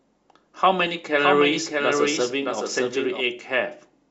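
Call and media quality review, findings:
Doubled audio track, 1.19–3.21 s. Full-band copy about 700 ms behind, about 5 dB quieter, dry, starting and stopping abruptly. Likely a second, slower capture path.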